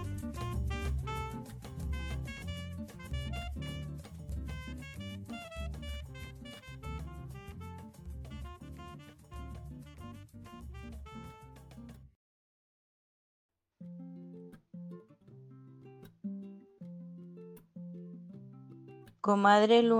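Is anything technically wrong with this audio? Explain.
No, nothing technically wrong can be heard here.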